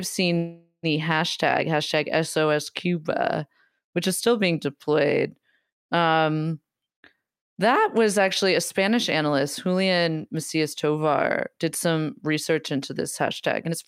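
At 0.37 s the speech stops and the last sound is drawn out as a fading buzz or hiss, trailing off into roughly 80 ms of silence before the talk resumes at 0.86 s. This is a call audio freeze. The likely cause is packets held up in transit, which emptied the jitter buffer, so the receiver stretched what it had to fill about 457 ms. When the packets arrived, playback picked up where it had stopped. Nothing was lost, but the delay grew by those 457 ms.

From 13.67 to 13.75 s the speech sounds briefly rushed, running at about twice normal speed (204%) with its pitch unchanged. This is a jitter buffer speed-up. The buffer was holding more audio than its target, so the receiver trimmed out short pitch-period slices one after another, removing around 70 ms in total to bring the delay back down.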